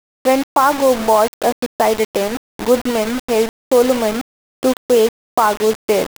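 Low bit depth without dither throughout: the speech was likely rounded to about 4 bits with no dither, leaving grainy, signal-following distortion roughly 15 dB below it.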